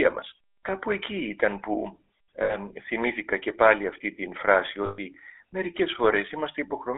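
Speech heard through the GSM full-rate codec throughout, with the buzzy, gravelly roughness of regular-pulse excitation and a line band of about 300 Hz to 3.6 kHz, which fits the 13 kbps full-rate coder. The codec damage is plainly audible. What sets it apart from a merely band-limited telephone line is the grainy buzz inside the voice itself, from the excitation keeping only every third sample, rather than just a dull, narrowed tone. Two bursts of lost GSM frames follow. The first runs from 2.42 to 2.57 s, just before "θυμήθηκα και πάλι αυτή". The second runs from 4.86 to 4.99 s, right after "πάλι αυτή την φράση". In each, the decoder repeats the last good frame's settings, so the sound is held as a rough, metallic ring instead of breaking off. That held ring tells it apart from a plain dropout or packet gap, which would fall to silence. The lengths fit about four and six 20 ms frames.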